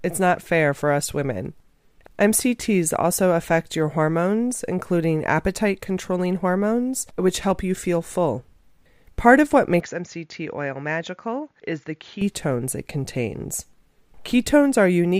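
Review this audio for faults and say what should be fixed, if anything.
From 9.80 to 12.21 s the speech goes duller and a few dB quieter, with nothing above 7.1 kHz and a faint new noise floor, then snaps back with no gap. That's likely an input switched to a poorer device, a narrower-band mic or headset profile. Lock the recording input so the system can't hop devices mid-take.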